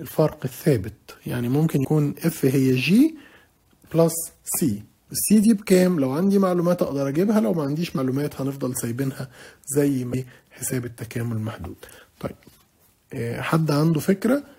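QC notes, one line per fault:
1.84 s, 7.97 s, 10.13 s: damaged data in a compressed stream. Corrupted bytes make the decoder misread frames and lose sync, producing brief disturbances under 20 ms each.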